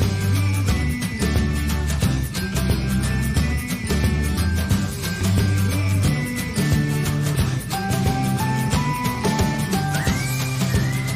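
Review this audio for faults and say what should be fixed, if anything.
No faults turned up on review, so nothing needs to be fixed.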